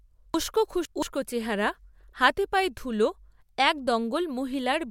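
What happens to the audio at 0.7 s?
Around 0.7 s the speech turns briefly jumbled, as if a fragment has been shuffled. The cause is chunks out of order between 0.34 and 1.02 s. One segment about 171 ms long plays three segments later than it should, after the ones that belong behind it. Nothing is missing, but the wrong sequence leaves three abrupt seams that produce the garbled moment.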